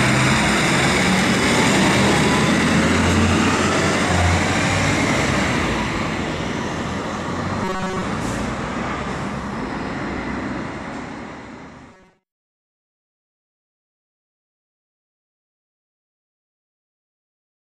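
Robotic sound from repeated short buffers appears from 7.64 to 8.03 s and again from 11.89 to 12.63 s, heard as a rigid metallic buzz at 188 Hz that roughly tracks the underlying sound. The likely cause is audio arriving too seldom, so playback loops a fragment of about 5.3 ms, one cycle of that buzz, while most of the real material in each stretch is skipped.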